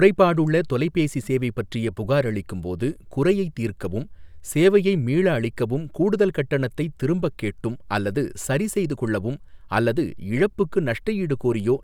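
Listening closely to the speech, nothing stood out as a technical fault at any point.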